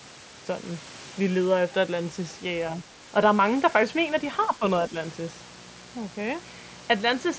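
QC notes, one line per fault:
0.72, 3.38 and 6.99 s, concealed Bluetooth headset packet loss: brief losses of 15 ms, then 7.5 ms twice, were patched with repeated recent waveform, leaving near-hidden tiny blips.
3.73 to 7.39 s, mains buzz: sharp switching spikes, twice per 60 Hz mains cycle, leak in, adding a steady raspy buzz with harmonics, about 25 dB below the speech.
4.56 to 4.63 s, speech suppressed in double talk: the echo canceller likely mistook the talker for loudspeaker echo, ducking the speech by around 10 dB for that brief moment.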